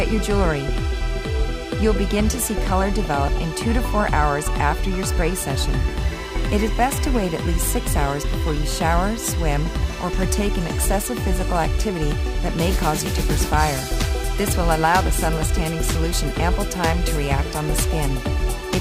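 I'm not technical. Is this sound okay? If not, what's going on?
No. From about 5.33 s to the end, the audio goes through a crude rate conversion: something changed its sample rate, in a way that fits a switch from 44.1 kHz to 48 kHz, by simply repeating samples instead of smoothing the change. Those repeats follow a regular pattern and add stray tones that don't belong to the sound. You hear them as a gritty buzz or fizz that rides on the louder and higher parts.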